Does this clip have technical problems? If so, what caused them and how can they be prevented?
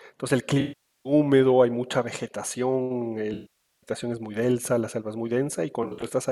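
Yes, AAC frame loss with concealment hits this speech at 0.60–1.13 s, 3.33–3.91 s and 5.83–6.10 s. The decoder rebuilds the missing audio from the last good spectrum, so the roughly half-second gaps smear and fade, while the final patch is a scatter of short losses. Protecting the stream with FEC or retransmission would prevent it.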